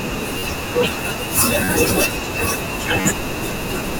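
New audio failed to reach the playback device in time on three occasions in this speech clip, so it replayed its last buffer, a repeated buffer fault. At 0.38, 1.64 and 3.01 s a 10.7 ms slice, which fits a 512-sample buffer, sounds four extra times over about 0.04 s, giving a brief buzzing stutter with hard joins and almost no audio lost.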